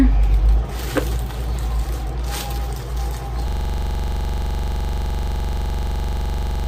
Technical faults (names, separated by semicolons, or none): system hang loop